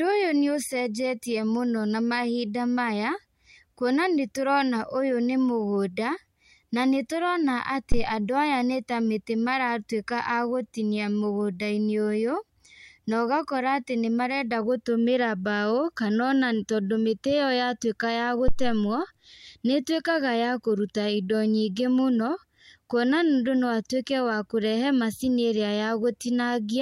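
Two deep thumps interrupt the speech, at 7.92 to 8.09 s and 18.48 to 18.88 s, each peaking around -11 dBFS and dying away over 38 ms and 90 ms. These are phantom power thumps, where a supply switched on a live input pushes a voltage step through the coupling capacitors.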